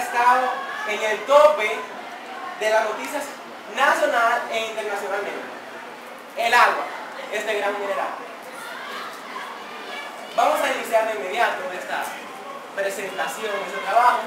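Crude rate conversion runs through the whole clip, giving a gritty, inharmonic fizz that rides on the louder and brighter parts of the sound. Samples appear to have been repeated to reach a higher rate, with no interpolation or filtering, which fits a step from 44.1 kHz to 48 kHz. The repeat pattern set by those two rates produces shifted, inharmonic copies of the audio, sitting roughly 25 dB below it.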